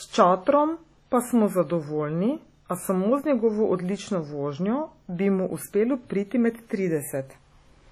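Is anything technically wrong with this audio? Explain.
Yes. Throughout the speech there is heavy WMA compression damage: a ringing, washy quality with a hiss that swells and fades with each syllable, and nothing above about 19.3 kHz. A transform coder with long blocks smears its quantisation noise across tens of milliseconds, and the starved bit budget, which points to roughly 32 kbps, zeroes weak spectral lines. That noise tracking the signal marks it as a likely WMA artefact rather than steady background hiss.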